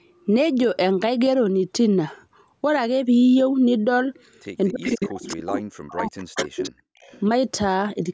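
From 4.7 to 6.64 s the speech keeps ducking, at worst by roughly 40 dB, adding up to around a second and a half of lost level. That's speech suppressed in double talk, most likely the echo canceller clamping down on both sides while the far end was talking too.

Overlapping that stretch there's echo leak: a copy of the voice trailing by about 288 ms, at 4.84 to 5.06 s, 5.23 to 5.36 s, 6.18 to 6.72 s (the loudest, maybe 10 dB under the speech) and 7.0 to 7.2 s (barely there). Some of the loudspeaker sound likely got past the canceller and came back.

Just before that last scrap, from 6.92 to 7.0 s, the room sound drops out for about 70 ms, as much as about 37 dB. That's background gated by the echo canceller, which shut the microphone down hard while the loudspeaker played.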